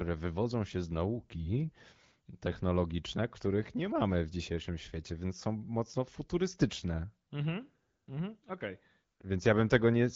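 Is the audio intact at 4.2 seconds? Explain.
Yes, the speech is intact at 4.2 seconds, with no dropout, glitch or other fault at that moment.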